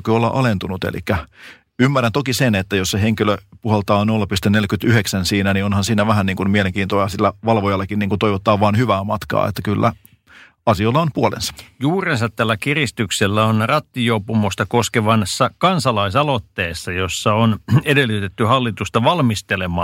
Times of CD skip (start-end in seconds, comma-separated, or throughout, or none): none